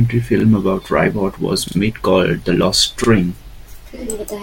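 Repeated buffer stutters occur at 0.40, 1.68 and 3.04 s in this speech clip. Fresh audio arrived late, so the previous slice, which fits a 40 ms buffer, replayed with a hard join. At 1.68 s, just before "made called", it repeats twice. Nothing is skipped.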